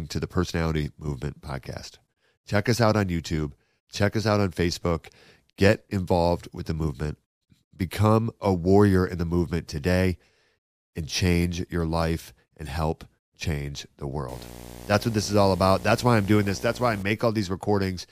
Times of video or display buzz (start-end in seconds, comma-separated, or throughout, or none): 14.28-17.03